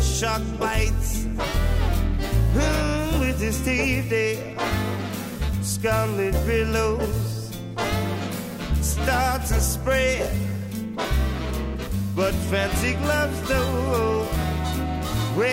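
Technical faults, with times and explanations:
No faults detected on listening; nothing to log.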